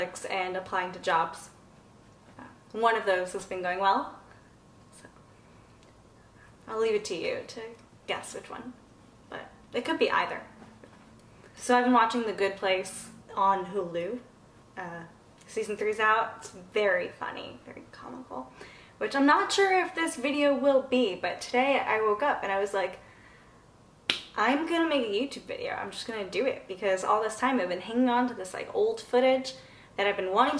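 No technical faults are audible anywhere in this audio.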